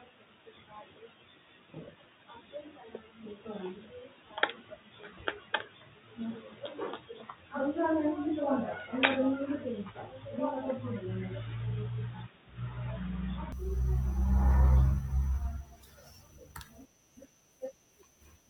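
Input switched to a poorer device, from the start until 13.52 s: the speech sounds dull and boxy, with nothing above 3.8 kHz, then opens up with no gap and no real level jump. The likely cause is a narrower-band microphone or headset call profile, adding faint background noise.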